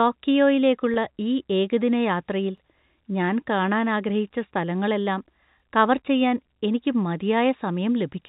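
At 0.94 to 0.96 s, just before "ഈ ഏകദിന യാത്രയിൽ", there is packet loss with pitch repetition. About 20 ms of audio failed to arrive, a gap that fits a single lost packet. The receiver filled it by repeating the last pitch period, so the hole becomes a brief held, slightly buzzy tone rather than a dropout. Because the loss is so short, the speech carries on almost immediately afterwards.

Overlapping chunks cause a small stutter twice, with the joins 3 s apart. The audio was handled in 3 s chunks, and each chunk begins before the previous one ended. That overlap makes about 21 ms of sound play twice at every join. The first join falls at 2.58 to 2.60 s, between "ഈ ഏകദിന യാത്രയിൽ" and "ഞാൻ കാണാൻ ആഗ്രഹിച്ച സ്ഥലങ്ങളെല്ലാം". The second falls at 5.60 to 5.62 s, before "കവർ ചെയ്യാൻ എനിക്ക്". Each is heard as a quick click or hiccup. All of this sits within telephone-band G.711 A-law sound, which carries nothing above 4 kHz.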